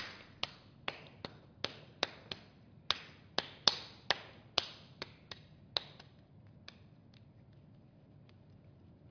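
No technical faults can be heard anywhere in the signal.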